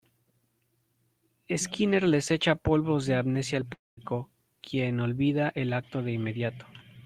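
At about 3.73 s the speech breaks off, and what you hear is the last bit of sound smeared into a fading buzz before it drops to near silence for roughly 0.19 s. Around 4.00 s the talker picks up again, but a chunk of about 240 ms just never comes back. That's a long network dropout, likely: packets stopped arriving, the receiver padded the gap with a concealment tail, then gave up and went quiet.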